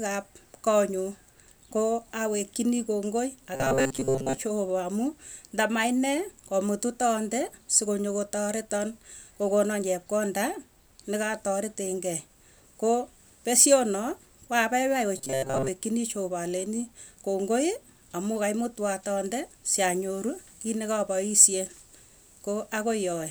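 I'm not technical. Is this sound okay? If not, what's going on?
No. Twice, from 3.55 to 4.37 s just after "awekchinii kongoi" and from 15.18 to 15.68 s after "pesyonoo koapaipai", the speech turns into a robotic sound from repeated short buffers. It becomes a stiff metallic buzz at 133 Hz, likely because tiny snippets of about 7.5 ms are being replayed in place of most of the real sound. Unlike a dropout, the sound never goes silent; the words stay roughly traceable under the fixed buzz.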